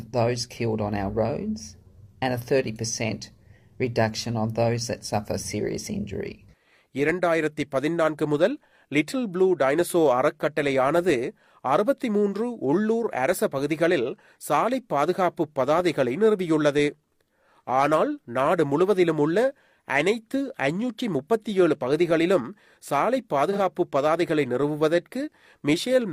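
At 23.52 to 23.58 s, AAC frame loss with concealment leaves a brief smeared, phasey patch rather than silence, fitting one lost 43 ms frame rebuilt from the previous spectrum.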